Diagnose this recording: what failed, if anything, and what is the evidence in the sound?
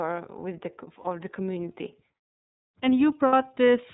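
The codec stage is at fault. The speech runs through iLBC for the whole clip, a narrowband VoIP codec whose coding fits the 13.33 kbps mode with 30 ms frames. Each frame's excitation is coded on its own, and nothing above 4 kHz gets through. The damage is plainly audible: the speech is band-limited and has a rough, synthetic texture. The call microphone processing's high-pass trimming of the lowest bass is normal, not a fault.

The network dropped packets twice. From 1.01 to 1.05 s there is a gap that fits one lost 30 ms frame. From 3.27 to 3.34 s there is a gap that fits two lost frames, about 60 ms. In each gap the iLBC decoder fills the hole by repeating the last pitch cycle mixed with noise, so it sounds like a held, buzzy or breathy vowel. Because iLBC frames stand alone, the speech snaps back almost at once when good frames resume.

The call processing's automatic gain control judged the input too quiet and raised its gain gradually. 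From 2.67 s to 3.93 s the level climbs by about 5 dB. Voice and background swell together, which shows the change is a gain ramp applied to the whole signal rather than something the talker did. The second packet loss falls inside this rising stretch.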